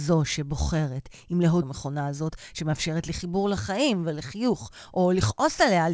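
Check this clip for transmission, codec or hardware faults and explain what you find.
Two faults show up in this speech clip, heard over a G.722-style call path with nothing above 8 kHz.

Skip ahead, 1.62 to 1.64 s: the speech jumps abruptly forward with no gap, losing roughly 0.4 s. A stretch of audio was dropped while later audio was already waiting, and the remaining sides were spliced directly.

Jitter buffer speed-up, 1.72 to 3.47 s: speech sounds hurried, running at 107% speed with unchanged pitch. The receiver trimmed short pitch-period pieces, roughly 150 ms total, to reduce excess delay.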